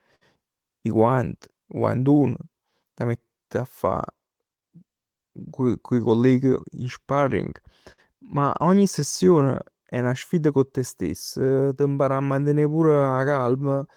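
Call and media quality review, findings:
Clock drift between sender and receiver. Symptom: small timing hiccups recurring through the whole call at uneven intervals. Probable component: receive-side jitter buffer versus sender audio clock. Mechanism: sender clock runs about 5 percent slow, so the buffer keeps draining and the receiver must pad the stream to keep playout going.

Repeated timing corrections, 1.16 s to 13.83 s. Symptom: if heard at all, faint hiccups or an unsteady, slightly dragging tempo. Probable component: jitter buffer adaptive playout. Mechanism: receiver repeatedly inserts short repeated pieces, all in the same direction, unevenly spaced, playing at an effective 96 percent speed. Net result is roughly half a second of added material across the stretch.

Short stall from a late packet, 0.15 s to 0.23 s and 7.92 s to 8.00 s. Symptom: a sound held too long, with a slight buzz or dip, and no content lost. 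Probable component: jitter buffer underrun. Mechanism: the packet arrived late and the buffer ran empty. The receiver stretched the last sound, 58 ms and 56 ms respectively, then resumed at the same point, adding the same amount of delay.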